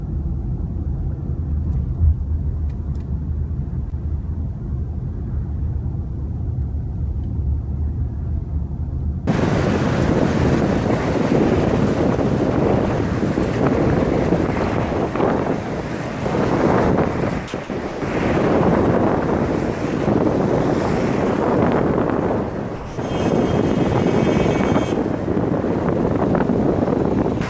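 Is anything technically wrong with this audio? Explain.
Yes, there are two kinds of fault.

At about 3.90 s there is a brief smear lasting roughly 40 ms, where the sound seems to carry on unnaturally for an instant before the real audio returns. This is short concealed packet loss. About 20 ms of the stream arrived too late for the decoder, and the receiver covered the gap by extending the preceding sound for about 18 ms before blending back into the incoming audio.

Later, the sound gives way to a flat, steady noise in short bursts at 17.48–17.54 s, 17.64–17.70 s and 17.88–18.02 s (about 60, 60 and 140 ms), then again for about 220 ms at 22.76–22.98 s. The likely cause is sound dropped by the voice detector. The sender judged these moments to be background and stopped transmitting, so the receiver inserted comfort noise until the detector picked the sound up again. The audio's ceiling at 8 kHz fits the G.722 call path it travelled through.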